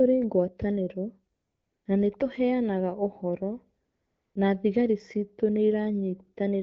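From 1.35 to 1.85 s, just before "na nĩ tũheanaga ũhoro", and again from 3.85 to 4.35 s, before "na thigari ciitũ nĩ", the real background gives way to a smooth, steady hiss that switches in and out. This is AMR comfort noise: for half a second each time no speech frames were sent, and the receiver synthesised noise from a rough level-and-spectrum description. The AMR-WB link, at 12.65 kbit/s, leaves the speech with only light coding damage.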